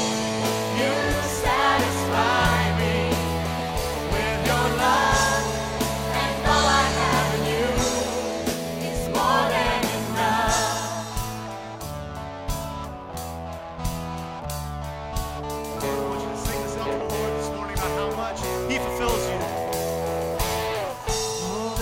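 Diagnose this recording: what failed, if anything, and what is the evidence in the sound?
No fault is audible anywhere in this recording.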